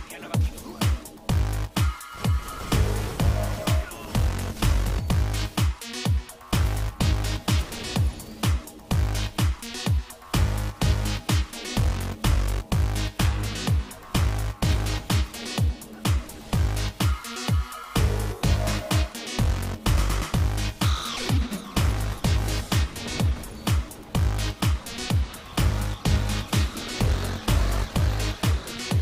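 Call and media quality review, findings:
Single sharp click at 0.34 s, likely dropped samples: a fraction of a millisecond missing, so the waveform jumps ahead. Nothing audible lost, just the tick.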